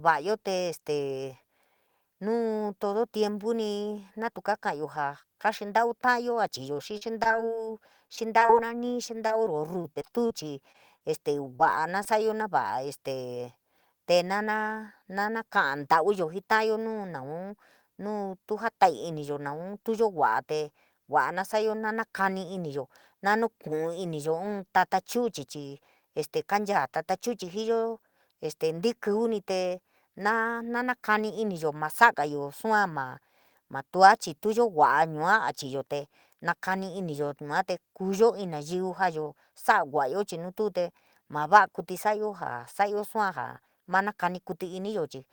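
Speech, with repeated packet loss (robotic sound) from 6.73 to 12.07 s, starting just after "ka’ntau ta’ayo a". Packets go missing again and again across this stretch. Each gap lasts at most 36 ms. The receiver patches each one by stretching the last sound. That patching covers about 9% of the span. About half a second of audio is lost in total. The result is choppy speech with small pieces missing.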